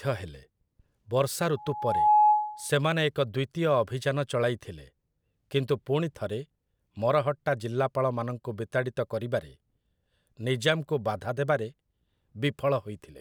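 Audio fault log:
1.56–2.71 s, loudspeaker feedback squeal: microphone re-amplifies its own loudspeaker past unity gain at 845 Hz, so a tone swells within half a second to roughly 10 dB above the speech.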